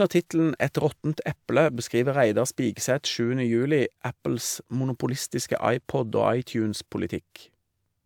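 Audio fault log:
No technical faults can be heard; the audio runs continuously without any interruption.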